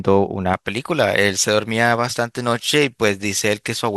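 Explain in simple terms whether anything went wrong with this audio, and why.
Something went wrong. From about 0.54 s to the end, the speech sounds thin, bright and hissy. The s and sh sounds are too sharp. This fault is called pre-emphasis left on. Before recording or sending, the high tones were deliberately turned up so they would survive noise. On playback, a matching step should have turned them back down. That step was skipped, so the treble stays too loud and the voice loses its warmth.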